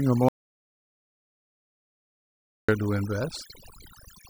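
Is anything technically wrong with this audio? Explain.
Yes. Two faults are audible in this speech clip.

Throughout, there is overdone noise removal. A noise reduction stage was set far too aggressively, so every frequency band that sits close to its noise estimate gets pulled down hard or switched off, including the quieter parts of the voice. The background collapses into near silence scattered with twinkling, chirpy specks, and the voice has its softer detail stripped away along with the noise.

From 0.29 s to 2.69 s there is an audio dropout to silence, lasting about 2.4 s. The input signal was likely lost, through a disconnected device, a failed link or an accidental mute, while recording carried on writing silence. The sound cuts off abruptly and returns just as suddenly, and the gap between is dead silence with no room tone at all. Whatever was spoken in that stretch is missing from the recording.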